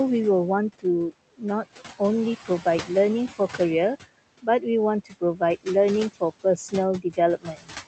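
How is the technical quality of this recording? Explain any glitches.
The speech is over-processed by a noise suppressor, which colours the whole clip and four times swallows parts of the speech. The room noise sits about 16 dB under the speech, and the call path's Opus coding caps the audio near 8 kHz.

Noise suppressor artifacts run throughout. The suppressor pulls steady room noise down by about 15 dB frame by frame, so the background dips between phrases and swells under them. Unlike codec artifacts, this pumping follows the speech.

Speech cut by the noise suppressor occurs at 4.42–4.66 s (drop of about 12 dB), 5.05–5.41 s (about 15 dB), 7.01–7.18 s (about 15 dB) and 7.37–7.74 s (about 18 dB). Quiet consonants and endings were mistaken for noise and lowered, each time losing roughly a tenth to a fifth of a second. The speech sounds faint rather than cut to silence as in a dropout.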